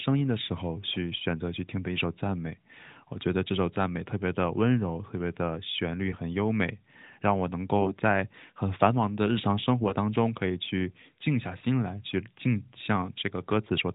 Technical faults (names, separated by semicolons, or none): AMR bit errors